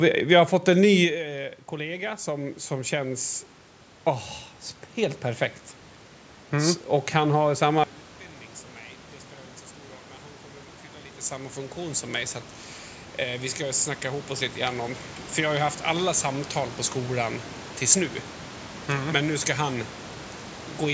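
Around 1 s the talker moves away from the microphone and the level drops by about 14 dB. From 1.71 to 3.32 s automatic gain rising lifts it by about 6 dB, so speech and room noise swell together. From 13.18 to 15.8 s there is a further rise of about 5 dB. On a waveform both rises appear as a gradually widening envelope. On a spectrogram the background band brightens along with the voice.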